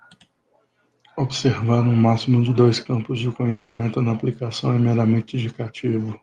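From 3.49 s to 3.82 s the speech stops progressing and is replaced by a smeared, buzzy continuation of the last sound that fades over about 0.3 s. The speech then resumes with that stretch simply missing, and no true silence falls in between. This is likely a long network dropout, where the receiver's concealment stretches the last received audio to cover missing data. It differs from a brief packet-loss glitch, which lasts only tens of milliseconds, and from a hard mute, which would leave a clean silent gap rather than a fading tail. The Opus call path around it is band-limited near 12 kHz.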